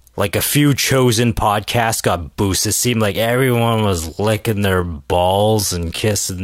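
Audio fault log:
3.14–6.43 s, time-stretched section: Right after "seemed like", the speech abruptly slows to about 0.63 times its normal pace and stays that way to the end. The pitch does not drop with it. The speech drags, with stretched syllables. This is likely software lengthening the audio to fill a set duration. It repeats short slices to hold the pitch steady.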